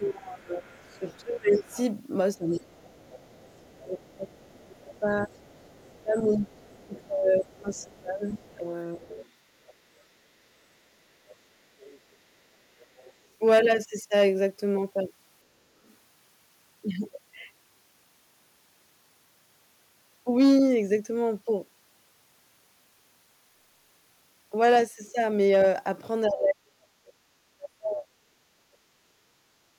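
A speech recording with echo-canceller problems in three forms. From the start to 9.11 s, and again from 26.28 to 29.33 s, the talker's voice repeatedly sinks, thins and breaks off. Across the first stretch about seven seconds are affected, with dips of around 25 dB. The later stretch loses about two seconds, with drops near 40 dB. This is speech suppressed in double talk: with both ends talking at once, the canceller likely mistook the local voice for loudspeaker echo and attenuated everything. A second, faint voice also runs underneath from 0.86 to 10.03 s and from 11.29 to 13.12 s, roughly 30 dB below the main talker. It returns as a brief scrap, fainter still, between 15.85 and 15.95 s. That is the other side's voice leaking through. The far end's audio, played on the talker's loudspeaker, was likely not fully removed from the microphone signal, so residual echo survives at low level. 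Finally, from 29.61 to 29.73 s the room sound ducks by about 17 dB for roughly a tenth of a second and then comes back. That is background gated by the echo canceller, which clamped the microphone down hard while the loudspeaker was active and released it a moment later.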